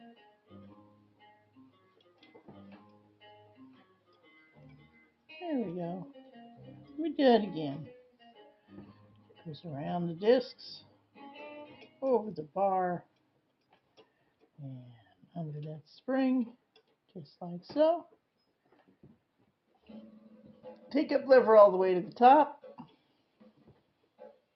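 A noise suppressor applied to music or sounds runs through the whole clip: a speech-oriented suppressor has been left engaged, so it treats sustained tones, ambience and reverberant tails as unwanted noise and keeps pulling them down, with the level swinging by roughly 5 dB as it reacts. Transients slip through before it clamps, while held material sags, giving an unsteady, pumping, thinned character to the sound. Sound cut by the noise suppressor is heard at 0.16–2.4 s (about 10 dB deepest), 2.85–5.08 s (about 10 dB), 8.05–9.46 s (about 11 dB), 10.81–11.19 s (about 12 dB), 11.67–12.02 s (about 11 dB) and from 23.41 s to the end (about 12 dB). In each stretch the suppressor judged the steady or decaying part to be noise and attenuated it harder than its surroundings, so sustains dip and tails are clipped short for a few hundred milliseconds to around a second in total per stretch, while sharper onsets stay largely intact.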